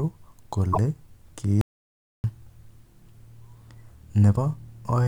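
At 0.69 to 0.78 s, damaged data in the compressed stream throws the decoder off: the bytes there no longer form valid frames, so it misreads them and hunts for the next frame header to regain sync. The speech breaks into a short blip lasting under a tenth of a second. The same thing recurs briefly at 4.33 to 4.38 s, about 50 ms this time, heard as a second glitch cutting into the speech.

Between 1.61 and 2.24 s comes an audio dropout to silence, likely caused by the input signal being lost while recording carried on writing silence. The speech cuts off abruptly and returns mid-flow after about 0.63 s of total silence. No room tone or background remains in the gap, and whatever was said during it is simply absent.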